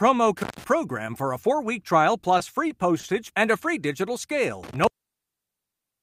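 A loose cable or plug opening for a moment, an intermittent contact, cuts the speech at 0.37 to 0.64 s, with the line open for about 146 ms. Crackle marks each edge and faint hiss fills the gap. After "a four week trial" the jitter buffer runs empty three times, each a short stall from a late packet: at 2.38 s and 2.68 s the receiver holds the last sound for 20 ms, and at 3.00 s for 30 ms before "and a free digital". Each wait shows as a brief smeared hold with a slight buzz or dip, and nothing is lost. Intermittent contact returns after "and a free digital" at 4.63 s, opening for about 1.3 s to the end, with crackle at its onset and hiss beneath the silence.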